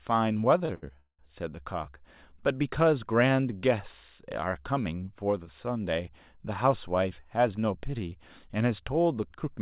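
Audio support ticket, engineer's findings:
Repeated stalls (stutter), 0.58–1.29 s: four holds, longest 186 ms, about half the span stretched. Jitter buffer ran dry; receiver extended prior sound. Spectrogram shows smeared, repeated frames. Band-limited to 4 kHz, consistent with G.711 mu-law.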